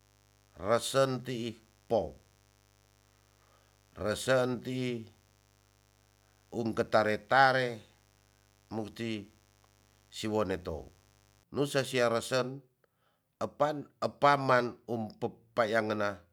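Speech clip with mains buzz from the start to 11.43 s. Switching spikes on the 50 Hz supply cause a raspy harmonic buzz, roughly 35 dB below the speech.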